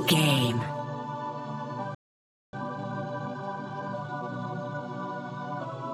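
The audio cuts to silence at 1.95 s and stays silent until 2.53 s, a gap of about 0.58 s. This is a playback stall, likely caused by the player running short of buffered data or its output thread being blocked. Unlike a dropout, which loses material, the output simply goes silent until the player recovers. The break is simply an unexpected pause in mid-flow. From 2.53 s to 4.85 s the player makes up the lost time with time-compressed catch-up, running at 1.25 times normal speed by cutting out small slices and cross-fading across the joins. What separates this from a simple speed-up or a wrong sample rate is that the pitch stays where it belongs. The audio sounds hurried rather than higher until it settles back to normal pace at 4.85 s.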